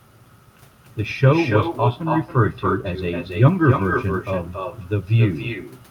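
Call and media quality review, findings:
Echo with no canceller, throughout, 0 to 6 s. Every phrase shadowed by a quieter, thinner copy roughly 300 ms later, about 7 dB below the direct speech. Probable component: far end on loudspeaker with no active echo cancellation. Far mic picks up its own playback and returns it across the network round trip.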